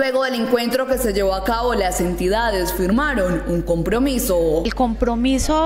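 From 0.93 s to the end, mains hum: a steady 50 Hz tone, only about 10 dB under the sound, leaking in from the power line. Unlike rumble, its pitch never wavers.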